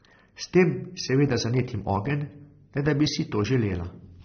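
Transcoding between lossy codecs runs through the whole speech clip. Nothing sounds above 6.3 kHz, and the sound carries two layers of coding damage at once: swirly, watery smearing on the voice together with a coarse, grainy edge. This is likely a low-rate AAC-LC encode, around 24 kbit/s, later re-encoded to MP3 near 45 kbit/s. The second encoder wastes bits reproducing the first one's artefacts, adds its own, and keeps the narrowest bandwidth.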